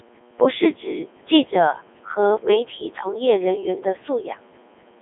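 A speech clip run through the Codec 2 vocoder for its whole length. Only pitch, voicing, energy and a spectral envelope survive, so the voice is rebuilt from sine waves and comes out robotic and buzzy. The heavy damage fits about 3.2 kbit/s, squeezed into a 300 Hz to 3.5 kHz band, with nothing above 3.7 kHz.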